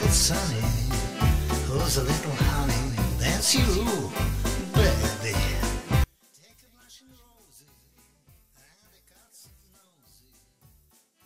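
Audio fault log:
6.04–11.25 s, one channel inverted. From 6.04 s to the end, the mono sum falls by about 33 dB. Only a faint remnant is left. The likely cause is reversed polarity on one stereo channel, so content common to both channels cancels.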